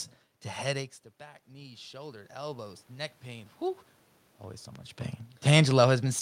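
From 0.74 to 3.59 s the automatic gain control is rising: after the voice drops by about 16 dB around the 1 s mark, as the talker moves away from the microphone, the gain climbs by about 8 dB over nearly three seconds. Unlike a talker simply coming closer again, the room noise swells along with the voice, and the lift is slow and steady rather than tracking the talker's position.

At 4.76 s a single loud pop, roughly 10 dB above the speech, cuts through the sound, which carries on underneath. It is a short, sharp click-thump lasting about 20 ms, most likely from a sudden voltage step such as a plug, switch or static discharge. Unlike a dropout or glitch in the signal, nothing is missing or repeated around it. The talker's movement near 5 s is a separate level change.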